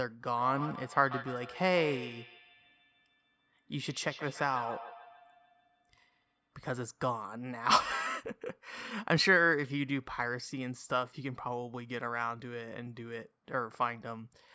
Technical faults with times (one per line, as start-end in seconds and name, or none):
0.33-6.53 feedback echo between two devices